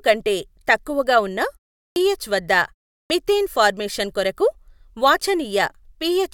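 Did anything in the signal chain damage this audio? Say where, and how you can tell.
Yes: a clipped start after a pause, at the playback output stage. After pauses of about 0.4 s, speech resumes abruptly at 1.89 s, following "కంటే తక్కువగా ఉన్న", and at 3.03 s, before "మిథేన్ ఫార్మేషన్ కొరకు", each missing about 70 ms of onset while the output device wakes from idle.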